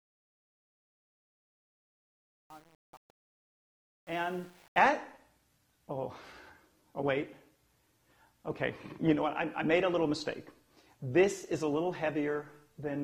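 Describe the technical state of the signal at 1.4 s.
Truncation distortion on a fade, 0.0 to 4.78 s: the fade-in runs at what sounds like an 8-bit word length without dither, so at 1.4 s quiet levels collapse into coarse square steps, sounding gritty.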